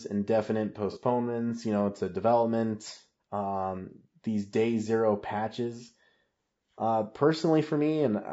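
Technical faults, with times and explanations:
Throughout: low-delay AAC compression. The speech sounds rough and grainy, with noise filling the gaps between harmonics and a thin, synthetic top end. This is likely the short frames of a low-delay AAC coder, which resolve pitch poorly at a bitrate around 32 kbps.
0.92 to 0.97 s: AAC frame loss with concealment. About 30 ms of audio goes missing, which fits a single lost frame. The decoder patches the gap from the preceding spectrum, so the moment comes out as a brief smeared, noisy blur.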